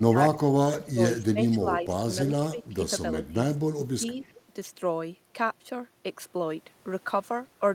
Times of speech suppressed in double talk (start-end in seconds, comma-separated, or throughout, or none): 0.00-1.90, 2.16-3.35, 3.72-4.32